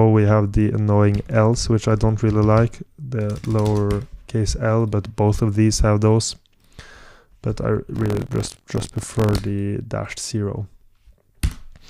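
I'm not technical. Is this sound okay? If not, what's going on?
No. From 7.94 to 9.39 s, a robotic buzz rattles the sound 43 times a second. That's buffer tearing: playback slipped out of step and keeps mixing in slivers of slightly older audio.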